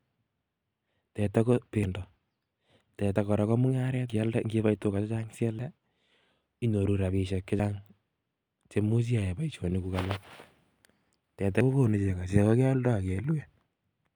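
The recording software likely read its buffers too late, a dropped buffer (overrun), so pieces were overwritten and the speech skips ahead. This happens at 1.84 s after "teta ko", at 3.16 s before "kora ko mung'aret", and at 4.10 s after it. It happens again at 5.59, 7.60 and 11.61 s. Each skip loses about 40 ms, except the one at 4.10 s, which loses about 150 ms.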